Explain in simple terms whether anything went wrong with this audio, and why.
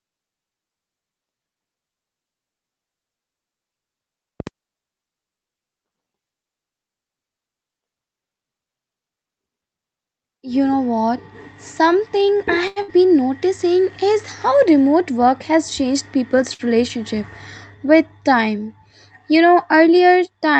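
At 4.40 to 4.49 s there is a loud pop: two sharp pops close together, louder than the speech, which keeps going underneath. The likely cause is a sudden electrical jolt, such as a plug, switch or static spark, reaching the recording.

The speech also travelled over an internet call link, and its timing slipped twice. A short stall from a late packet holds one sound for about 86 ms, from 12.67 to 12.79 s. Another holds a sound for about 55 ms, from 16.54 to 16.62 s. Each time a piece of audio arrived late. The receiver stretched the last sound to cover the wait, then carried on. Nothing is lost, but the sound drags briefly.

Just after, from 12.82 to 12.91 s, comes a burst of packet loss. About 60 ms of audio never arrived in time. The receiver filled the hole with a fading copy of the last sound, then jumped ahead. That short stretch of speech is gone.

From 15.53 to 16.40 s there is a jitter buffer speed-up. 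Too much audio had piled up waiting, so the receiver trimmed tiny slices, about 70 ms in all. Speech runs about 6% faster at the same pitch and sounds slightly rushed.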